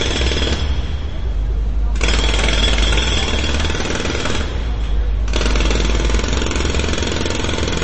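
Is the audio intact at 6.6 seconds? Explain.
No. At 6.6 s, as throughout, there's plainly audible MP3 compression, likely from a low bitrate around 32 kbps. Treble is cut flat at 8.3 kHz, a hard ceiling on a spectrogram, and weak components flicker frame to frame, making the sound watery and swirly.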